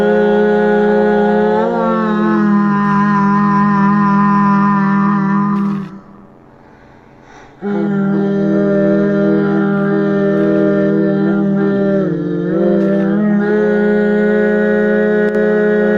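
One stereo channel likely dropped out from 15.29 to 15.35 s, leaving the mono sum with only one side for 60 ms. Sound common to both channels dips abruptly by about 6 dB, anything unique to the lost side vanishes, then the level snaps back.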